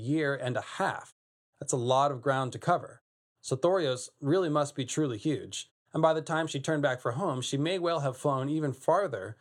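No technical faults can be heard anywhere in this speech clip.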